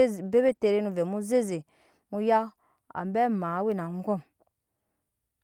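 From 0.47 to 0.53 s and again from 3.03 to 3.05 s, lost packets were rebuilt from error correction. The decoder played low-bitrate copies, so the sound turns briefly rough and noisy. At 0.55 to 0.59 s comes a short concealed packet loss. About 20 ms never arrived, and the receiver extended the preceding sound, leaving a quick smear.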